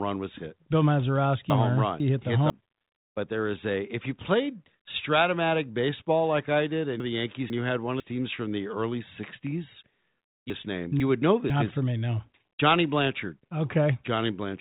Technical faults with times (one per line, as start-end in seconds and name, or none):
1.50-2.50 chunks out of order
7.00-8.00 chunks out of order
10.50-11.50 chunks out of order